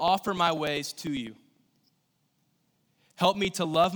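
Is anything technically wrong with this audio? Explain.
Yes. From 0.08 s to 3.84 s there are periodic USB or driver dropouts: something stalls the audio path every 0.099 s, and roughly a millisecond of speech is skipped each time. The result is about forty evenly spaced ticks, ten per second, through the speech.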